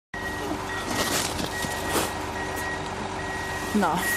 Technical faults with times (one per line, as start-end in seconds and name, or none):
0.00-4.17 MP2 compression